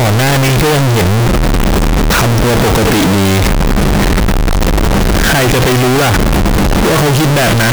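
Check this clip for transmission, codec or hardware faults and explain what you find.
There is one fault, present from start to finish: the 32-bit float samples were likely read as 32-bit integers. Sign and exponent bits then dominate each value, squaring the waveform at an almost fixed, high level, so the speech turns very loud and harsh, background noise matches it in level, yet pitch stays followable.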